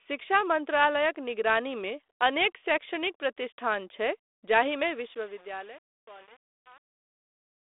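From 4.94 s to 7.74 s the fade-out shows truncation distortion: the gain stage keeps too few bits and adds no dither, pointing to about 7 bits. As the speech sinks toward silence, the waveform collapses into coarse steps. The fade sounds gritty, over telephone-band audio that fits 32 kbit/s G.726.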